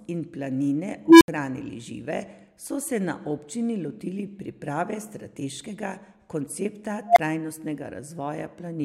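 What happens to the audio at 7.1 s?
An unstable filter runs away from 7.07 to 7.19 s: a recursive stage feeds back on itself, so a squeal around 700 Hz swells over about 93 ms, clips, then drops into 23 ms of silence. The waveform balloons until it clips before going flat; the spectrogram shows a bright horizontal band, then a blank gap.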